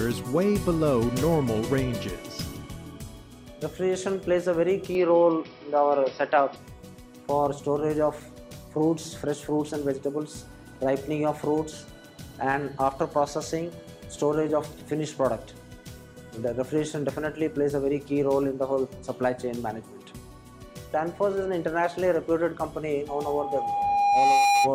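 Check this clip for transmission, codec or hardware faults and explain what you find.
Two faults are audible: a brief change in the input path near the start, and acoustic feedback at the very end.

From 4.95 to 6.56 s the input likely switched to a poorer device. Its narrower passband removes everything above 5.6 kHz, so the sound turns dull and boxy with no gap at the switch. The level shifts by about 5 dB, and a faint new noise floor appears well beneath the signal.

From 23.08 to 24.72 s there is a loudspeaker feedback squeal. The microphone picks up its own loudspeaker output, and at 808 Hz the loop gain exceeds one, so that tone feeds on itself. It swells over roughly a second and a half until it stands about 10 dB above the sound.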